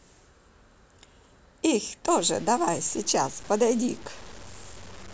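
From 2.07 s to the end of the speech, a grainy, rasping distortion rides on the sound and changes with it. Quiet stretches turn gritty, and the faintest tails sputter or drop to silence. This is low bit depth without dither, likely from truncation to about 6 bits, leaving error only around 25 dB below the signal. The waveform shows visible stair-steps, and the spectrogram shows broadband hash that tracks the speech energy rather than a steady noise floor.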